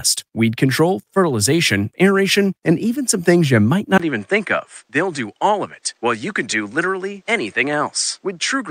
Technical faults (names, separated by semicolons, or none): input switched to a poorer device